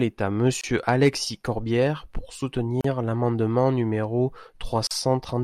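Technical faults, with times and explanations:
0.61–0.64 s, 2.81–2.84 s and 4.87–4.91 s, gap at a join of encoded pieces: gaps of about 25, 35 and 38 ms open after "est à", before "l’amendement numéro" and after "l’amendement numéro". Separately encoded segments were joined with their start-up delay and end padding left in. Unlike a dropout, nothing is lost: the speech resumes exactly where it stopped, and the softened edges come from the codec.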